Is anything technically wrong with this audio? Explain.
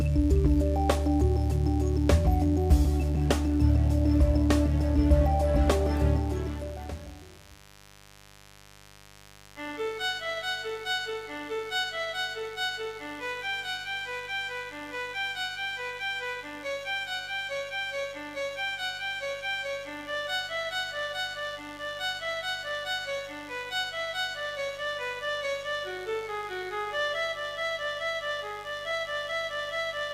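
Yes. A mains buzz runs through the whole clip, from start to finish, sitting roughly 25 dB below the wanted sound. It comes from 50 Hz mains interference, where a dimmer, rectifier or unshielded path injects sharp switching spikes twice per cycle, so 100 times a second. That produces a steady, raspy buzz. A spectrogram would show a dense comb of horizontal lines at multiples of 50 Hz reaching into the kilohertz range, and the waveform would carry regular narrow spikes spaced 10 ms apart.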